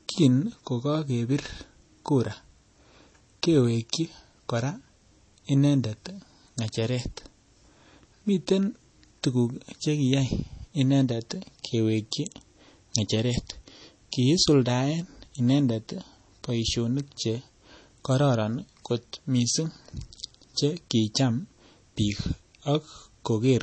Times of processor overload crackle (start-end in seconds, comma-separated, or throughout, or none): none